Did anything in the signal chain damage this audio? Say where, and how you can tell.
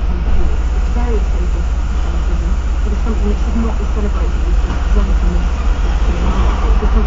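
No, nothing in the chain audibly damaged this audio, and I can't point to any stage where it was harmed.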